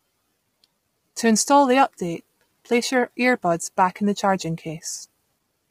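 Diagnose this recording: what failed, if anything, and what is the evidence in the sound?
The failure sits at the codec stage, most likely low-delay AAC compression of the AAC-ELD kind used for video calls, run at a starved bitrate that fits roughly 24 kbps. Throughout the speech the damage is heavy: the voice sounds rough and grainy, with noise filling the gaps between pitch harmonics and a dulled, synthetic-sounding top band. The encoder's short frames resolve harmonics poorly, and with so few bits it smears noise across the spectrum and rebuilds the highs artificially.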